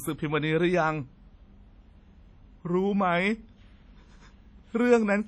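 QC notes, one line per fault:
Throughout, WMA compression: a transform codec, likely WMA at a low bitrate near 32 kbps, has quantised the speech heavily, smearing noise over tens of milliseconds and zeroing weak spectral lines, so the sound rings and turns washy, with hiss that swells and fades alongside the speech.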